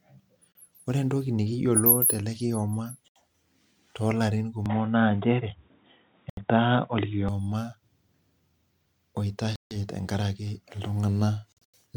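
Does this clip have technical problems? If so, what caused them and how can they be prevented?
Yes. Bluetooth dropouts, likely from packets arriving late, silence the speech at 0.52 s (just before "ore entoki nikiyiolo tele"), 3.08 s (after "entoki nikiyiolo tele kioma"), 6.30 s, 9.56 s and 11.53 s. Speech resumes as though it had continued, unlike a tonal change. Keep the headphones close and away from Wi-Fi congestion.

An input likely switched to a poorer device makes the sound dull from 4.66 to 7.29 s, with nothing above 3.8 kHz and a level shift of about 5 dB. There is a tonal change but no gap. Lock the recording input so the system cannot switch devices.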